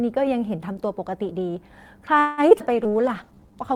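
From 2.19 to 2.88 s the speech turns choppy and robotic, with four holes, the longest 183 ms. This is repeated packet loss: audio kept going missing, and each gap was bridged by extending the last sound, covering roughly a third of the stretch.

From 2.70 s to the end, the speech also turns rough and muffled, with the top end cut away. That points to a call bitrate drop, which fits the encoder being pushed from about 40 down to 15 kbps for the final second.

Between 2.90 and 3.53 s the speech drags at about 86% speed with unchanged pitch, sounds drawn out. This is a jitter buffer slow-down: the receiver repeated short pitch cycles to rebuild its reserve, stretching the passage by 97 ms.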